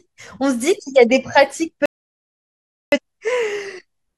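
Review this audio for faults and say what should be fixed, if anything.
The speech cuts to silence at 1.86 s and resumes at 2.98 s, with about 1.07 s simply missing. This is a digital broadcast dropout: the receiver stopped getting valid frames and muted until good ones returned, so that stretch is lost. Better reception margin or stronger error protection would prevent it.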